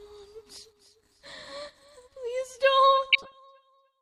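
A recording of everyday sounds, marred near its end by a patch of burbling sub-band noise riding over the audio from 3.10 to 3.39 s. This is DAB burbling. Weak reception let bit errors slip past the error correction into the MP2 data, so corrupted samples put short blips of noise in single sub-bands. The quarter-second span points to roughly a dozen damaged frames, at an error rate of a fraction of a percent.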